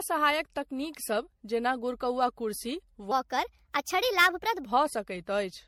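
A short speech clip with generation loss all the way through: the whole thing sounds swirly and hollow, and consonant attacks are smeared. That's more damage than one pass at 64 kbit/s would leave, so it's likely been through an MP3 encode-decode cycle something like seven times, with each pass requantising on a shifted frame grid and piling up noise and spectral holes. There's also a section at the wrong speed from 3.11 to 4.66 s, starting right after "गुरकौआ कुर्सी". That stretch runs 1.23 times fast, so it sounds hurried and jumps up about four semitones before dropping back to normal. It's likely an edit or playback step that put that piece on the wrong clock, since speed and pitch shift together there.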